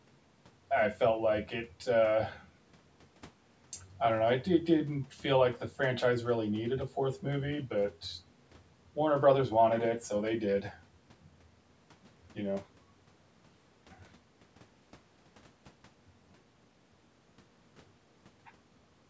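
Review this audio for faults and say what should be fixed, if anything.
No faults found; nothing needs fixing.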